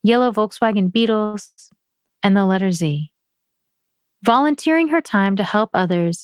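A short stall from a late packet occurs from 1.25 to 1.35 s in the speech. A packet failed to arrive on time, the jitter buffer ran dry, and the receiver held the last sound for about 80 ms until the data showed up. Playback then resumed from the same point, so nothing is lost. Instead, one sound is drawn out unnaturally, with a faint buzz or dip, and everything after it plays about 80 ms later than before.

A call audio freeze follows from 1.45 to 1.71 s. The last sound is extended as a fading buzz or hiss for roughly 120 ms and then drops into about 50 ms of silence. The speech then picks up exactly where it halted, with no part of it skipped. The likely cause is packets held up in transit long enough to empty the jitter buffer again, so the receiver had to fill the wait. That adds a further 123 ms of delay to the rest of the audio.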